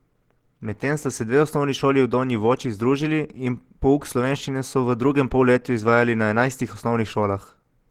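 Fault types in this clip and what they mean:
Opus compression: The speech was likely passed through the Opus codec at a very low rate, consistent with a bitrate around 16 kbps, where the encoder runs in its hybrid speech mode and has too few bits to describe the upper bands properly. The damage is plainly audible throughout. The speech sounds muffled and hoarse, with a rough, grainy texture in place of fine detail rather than the swirling gaps of MP3.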